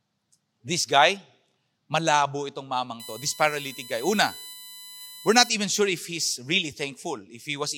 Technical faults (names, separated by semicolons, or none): USB whine